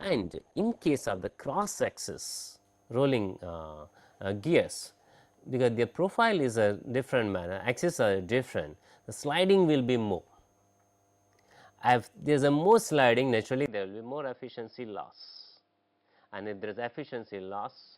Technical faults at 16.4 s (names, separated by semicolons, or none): input switched to a poorer device